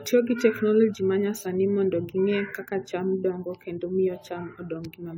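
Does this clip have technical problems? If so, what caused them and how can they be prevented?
Yes. Throughout the speech there is generation loss: the sound is swirly, smeared and hollow, with consonant attacks blurred. This is likely from re-encoding with a lossy codec, around ten times, each pass quantising on a shifted frame grid so errors pile up. The character fits AAC-LC at about 96 kbit/s. A spectrogram would show a hard ceiling near 19.9 kHz and blotchy holes between harmonics, and the waveform would show smeared transients. To prevent it, edit from a lossless master and encode only once, at the end.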